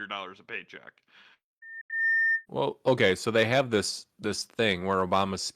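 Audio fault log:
1.62–2.46 s, loudspeaker feedback squeal: after "dollars a paycheck", a 1.8 kHz tone swells over roughly 0.4 s to about 5 dB above the speech; a bright horizontal spectrogram line.
1.81–1.91 s, digital broadcast dropout: the audio fades out in 3 ms and stays silent for 85 ms, consistent with two lost frames; a flat waveform gap and a blank vertical spectrogram strip.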